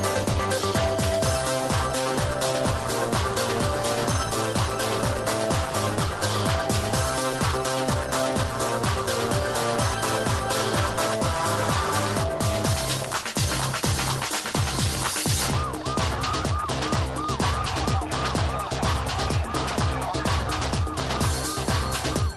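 No technical faults are audible.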